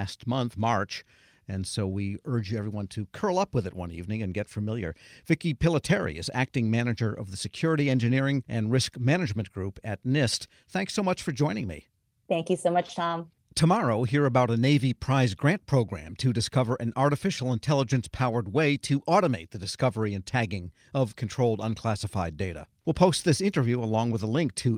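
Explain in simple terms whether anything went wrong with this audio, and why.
Nothing went wrong in this speech recording; there are no audible faults anywhere in it. Listening all the way through, nothing breaks, jumps or drops out at any point.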